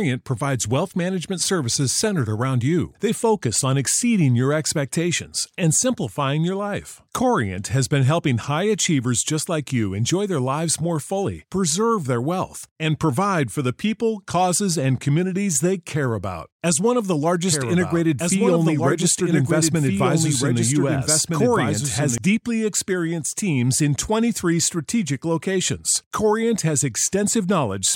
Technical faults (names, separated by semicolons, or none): doubled audio track